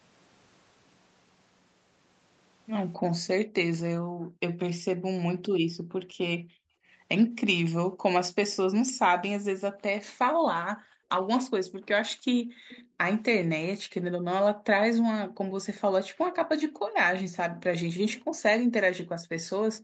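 From 2.97 to 8.03 s, and again from 9.71 s to the end, the background is gated by the echo canceller. Room sound drops by up to about 40 dB, totalling roughly a second and a half in the first stretch.

From 12.1 to 12.88 s a faint delayed copy of the speech follows 290 ms behind, well below the speech. This echo leak likely comes from incomplete cancellation on a loudspeaker end.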